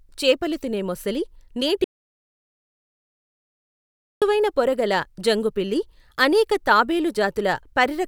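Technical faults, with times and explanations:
1.84–4.22 s, audio dropout to silence. Right after "చేపలు తినే మొసలి నీటి" the speech cuts off abruptly for 2.37 s. The gap is silent, with no room tone at all. The input was likely lost while the recorder kept writing zeros, so that stretch of speech is gone.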